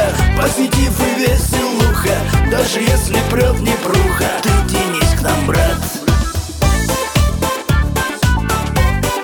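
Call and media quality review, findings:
No audible defects found in the signal path; level, continuity and timing hold steady across the recording with nothing to flag.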